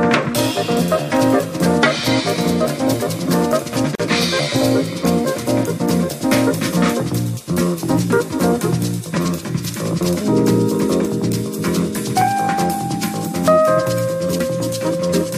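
A gap at a join of encoded pieces opens at 3.95 s and lasts about 44 ms, to 4.00 s. The audio was encoded as separate segments that were spliced without trimming, so the encoder's start-up delay and the padding on the final frame of the earlier piece both remain as dead air. The continuous sound drops briefly to silence with smeared edges, then resumes exactly where it stopped.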